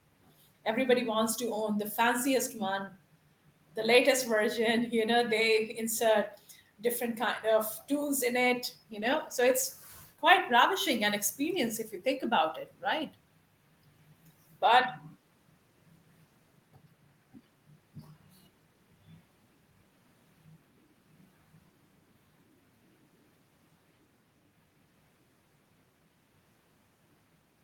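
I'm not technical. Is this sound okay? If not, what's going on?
No, there's one rough patch. From about 8.93 to 10.21 seconds the speech goes coarse and a bit muffled, losing some of its crispness, then clears up again. That's a call bitrate drop: the connection briefly thought it had less room, so the call squeezed the voice into far less data. It codes the sound more roughly and trims off the higher, brighter parts until the connection recovers, here after just over a second.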